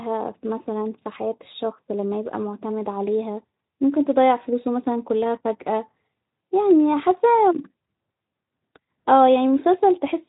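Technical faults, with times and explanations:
No technical faults turn up here; the speech just carries the gentle character of a Speex codec, with nothing above about 3.8 kHz and only light coding traces, which fits a setting of around 15 kbps.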